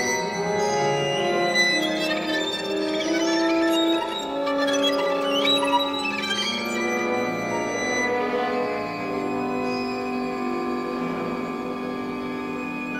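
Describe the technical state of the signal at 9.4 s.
A steady, raspy buzz sits well below the sound at 9.4 s and runs throughout the clip: mains buzz, switching spikes twice in every 60 Hz cycle producing harmonics up to several kilohertz.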